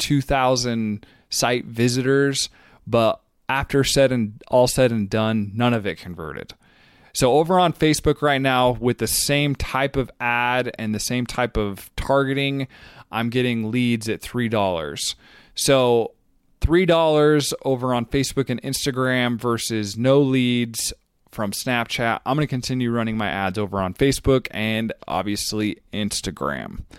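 Nothing goes wrong anywhere in this bit of speech, so there's no technical fault to walk through here.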